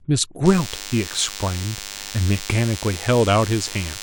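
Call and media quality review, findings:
DECT cordless phone buzz, 0.46 s to end of clip. Steady, thin 100 Hz buzz with dense harmonics under the speech, about 15 dB below it. Probable component: nearby DECT handset or base. Its 10 ms radio bursts are rectified in the audio path. Spectrogram: evenly spaced horizontal lines at 100 Hz multiples, continuous through pauses. Waveform: fixed 10 ms pulse train in the gaps.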